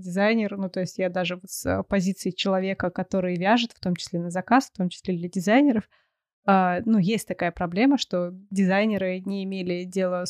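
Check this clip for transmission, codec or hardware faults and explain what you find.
Nothing in the recording stood out on listening as a transmission, codec or hardware problem.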